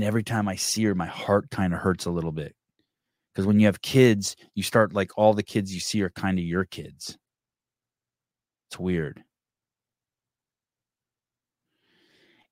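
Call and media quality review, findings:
No findings in this call and media quality review.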